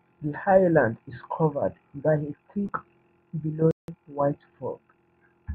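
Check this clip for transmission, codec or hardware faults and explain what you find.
Two faults are audible in this speech clip. One is a damaged FLAC frame, and the other is a muted gap.

At 2.66 to 2.69 s there is a corrupt FLAC frame. Bits in one compressed frame were altered, and the decoder did not reject it. From the damaged point onward, the prediction worked from wrong values. The result is an error lasting about 30 ms. It peaks at about −34 dBFS, so it is faint rather than full scale. Its length points to a single frame. Audio after it is clean again.

From 3.71 to 3.88 s, a corrupt frame was muted. This time the decoder refused the damaged data, and the player inserted silence in its place. The sound cuts out abruptly for about 0.17 s, which fits two frame lengths. Then it resumes with no shift in timing, because the silence fills exactly the span of the lost frames.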